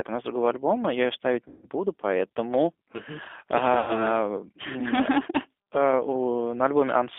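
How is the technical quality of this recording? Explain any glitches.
The recording is low quality, with a constant narrowband codec sound and two short dropouts patched by the decoder.

G.729 codec, throughout: The speech passes through a low-rate VoIP codec at 8 kbit/s, which rebuilds it from a vocal tract filter, a pitch predictor and a few pulses per frame rather than from the waveform itself. Only roughly 300 Hz to 3.5 kHz comes through, so the sound is muffled and boxy, and the coding damage is plainly audible as a rough, slightly synthetic texture.

VoIP packet loss concealed by the speech codec, at 1.48–1.67 s and 3.79–4.07 s: The first gap follows "альбома я ее ставить" and covers about 150 ms of lost audio, which fits five 30 ms packets. The second covers about 90 ms. In each, the decoder extends its last pitch and filter settings while lowering the level, so the sound is stretched and fades. 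It stays weak and distorted briefly after real packets return.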